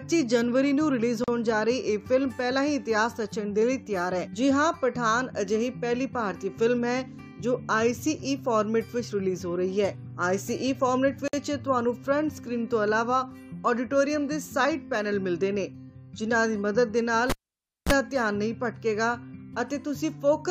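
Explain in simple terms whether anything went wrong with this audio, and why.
Two things went wrong. The first is a gap at a join of encoded pieces. The audio seems to have been compressed in separate chunks, about 10 seconds long, and then stuck together without trimming the bit of silence each chunk picks up at its start and end. At 1.24 s a hole of about 39 ms opens up, and at 11.28 s another of about 54 ms. Each is a brief dropout with slightly softened edges, after which the sound resumes where it left off.

The second is a cable pulled and plugged in while the sound was running. At 17.30 s a connector comes out, giving a pop, and the audio goes almost silent for over half a second. As the plug goes back in, its tip touches first and picks up a short burst of 60 Hz mains hum, lasting about 33 ms. Another pop follows at 17.92 s as the sound returns.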